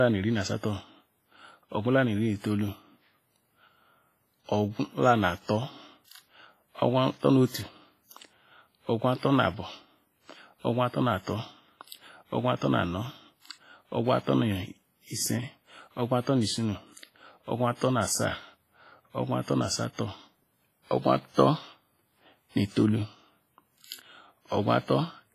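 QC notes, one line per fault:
Throughout: WMA compression. The sound rings and turns washy, with a hiss that swells and fades with the signal and nothing above 15.4 kHz. The cause is likely heavy WMA coding at a low bitrate near 24 kbps, zeroing weak lines. Unlike broadband noise, the hiss tracks the level.
9.18 to 9.23 s: pre-echo. A short hiss of about 52 ms comes just before a sharp attack, which then sounds soft and smeared. The codec spreads noise sized for the loud attack across its whole block, filling the quiet gap ahead of it. Unlike a click, this hiss precedes the attack.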